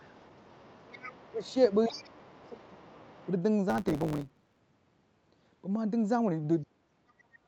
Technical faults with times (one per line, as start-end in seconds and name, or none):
0.00-2.35 other side's voice leaking through
1.29-1.45 speech suppressed in double talk
1.88-2.87 speech suppressed in double talk
2.82-3.30 other side's voice leaking through
3.69-4.59 block size mismatch (truncated)
6.64-7.47 speech suppressed in double talk